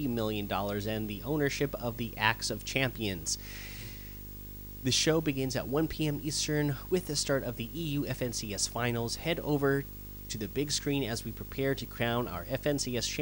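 From start to finish, video or display buzz sits under the speech: a picture signal leaking into the audio path, giving a harsh 50 Hz field-rate buzz with hash above it and a thin 15.6 kHz line tone, fairly loud against the speech. A spectrogram shows dense harmonic stripes and a steady high line.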